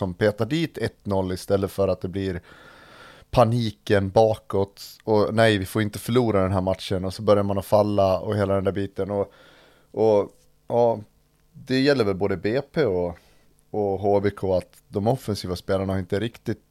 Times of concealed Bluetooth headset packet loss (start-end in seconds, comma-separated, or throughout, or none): none